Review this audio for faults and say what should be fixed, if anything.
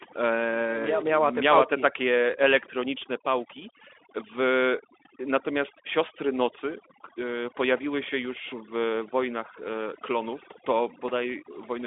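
Overdone noise removal runs throughout: frequency bands near the noise estimate are cut hard, leaving a background that drops and breaks up into twinkling specks. Prevent it by setting the noise reduction strength lower and checking that quiet speech survives.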